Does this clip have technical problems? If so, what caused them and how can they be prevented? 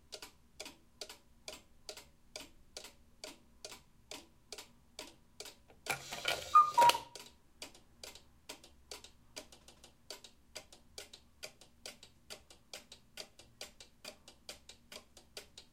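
Yes. Between 9.60 and 9.92 s there are repeated frames: a block of about 157 ms of the sound plays three times in a row, heard as a stutter, with the two extra passes adding about 314 ms to the clip. The block length fits a short run of compressed frames that was written or transmitted more than once, so the decoder simply played the same data again. Prevent it by using sequence numbers or timestamps to detect and discard duplicate frames before decoding.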